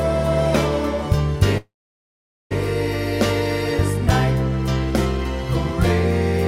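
At 1.57 s a call audio freeze holds the sound for about 0.93 s: the last sound smears briefly, then about 0.83 s of silence follows until 2.53 s. The likely cause is delayed packets emptying the jitter buffer. Unlike a dropout, nothing is lost; the audio resumes where it stopped, now running about 0.93 s late.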